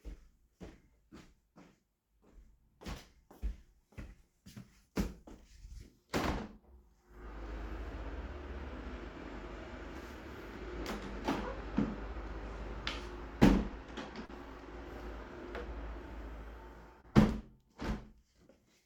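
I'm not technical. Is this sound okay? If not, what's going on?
No, not quite. There are two brief glitches, at 14.25 to 14.31 s and at 17.01 to 17.06 s. Each is a short concealed packet loss. A tiny piece of the audio, about 40 ms the first time and 20 ms the second, arrived too late to be played. The receiving end covered the gap by stretching out the sound just before it, then blended back in. You hear a quick smear or small wobble.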